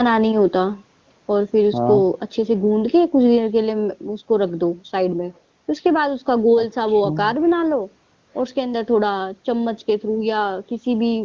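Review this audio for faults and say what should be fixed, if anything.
No faults turn up in this speech recording, so nothing needs to be fixed.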